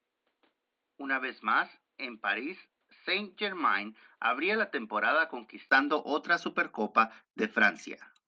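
From the start until 5.71 s the speech sounds dull and boxy, with nothing above 4.7 kHz, a slightly lower level and a different faint background noise well under the speech. At 5.71 s there is a silence of about 20 ms, then the full, brighter sound returns. This is likely an input switched to a poorer device. Unlike a plain filter or codec bandwidth drop, the brief gap and the simultaneous shifts in tone, level and noise floor point to a change of microphone.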